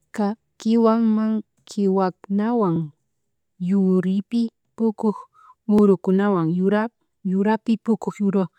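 At 2.76 to 2.79 s and again at 5.79 to 5.81 s the speech stutters briefly, a sign of overlapping chunks. The audio was handled in 3-second blocks, and each new block began about 23 ms before the previous one finished, so that slice of sound plays twice at the seam. The doubled fragment is heard as a small click or hiccup, recurring at the same 3-second spacing.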